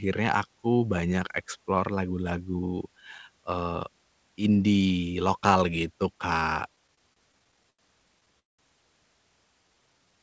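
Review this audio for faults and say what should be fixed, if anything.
Repeated stalls (stutter) occur from 6.76 to 7.80 s and again from 8.2 to 8.6 s. The first stretch has eleven short stalls, the longest 83 ms, covering about a fifth of it. The second has four stalls, the longest 192 ms, filling over half its span. Packets arrived late, so the jitter buffer kept running dry. The receiver stretched the last sound to cover each wait. Nothing is lost, but the sound drags and stutters. Fix the network path, or allow a larger buffer target so late packets still arrive in time.

A jitter buffer slow-down runs from 9.63 s to the end of the clip. Playback drops to 85% speed while the pitch stays the same. About 100 ms of extra sound is added. The buffer was low, so it repeated single pitch periods to rebuild its reserve. Sounds are drawn out. The band ends at 8 kHz, as expected for a wideband call codec such as G.722. 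Steadier packet delivery would prevent the refill.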